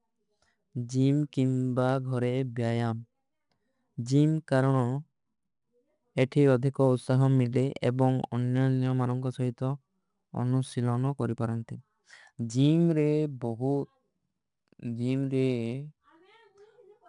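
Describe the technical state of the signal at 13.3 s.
At 13.3 s the speech carries 4-bit ADPCM compression, present across the whole clip. Each sample is coded as a coarse 4-bit step from a predicted value, with the step size adapting as it goes. The resulting error is a gritty hiss that rises and falls with the speech, clearly audible on louder passages, with roughness on sharp onsets. Nothing sounds above 10.6 kHz, which fits a data rate near 89 kbps.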